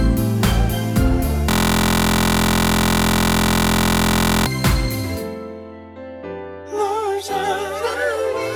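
From 1.50 to 4.46 s there's a system hang loop. The machine stalled while the audio hardware kept replaying one 23.22 ms slice, which fits a 1024-sample buffer. It repeats well over a hundred times and comes across as a steady buzz at about 43.1 Hz.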